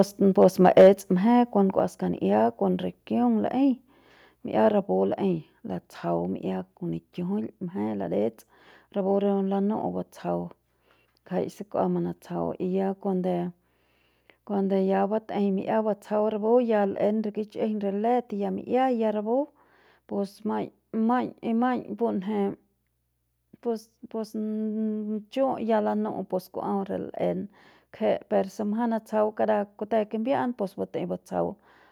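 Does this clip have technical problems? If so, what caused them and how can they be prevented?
Yes. From 0.42 to 0.88 s the loudest peaks are flattened with a harsh, crackling edge, likely microphone overload: input gain drove them about 4 dB past the converter's ceiling. Keep input gain lower for headroom.

At 0.81 s, during that distortion, the voice and background drop about 2 dB at once, likely the microphone volume stepped down by the call software reacting to clipping. Setting the level correctly beforehand, or disabling automatic gain adjustment, prevents this.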